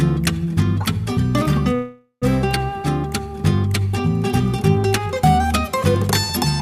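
A call audio freeze runs from 1.75 to 2.24 s. The sound stalls and is drawn out as a fading buzz, then 100 ms of silence, before resuming exactly where it stopped. Delayed packets likely emptied the jitter buffer, shifting everything after by 462 ms with nothing lost.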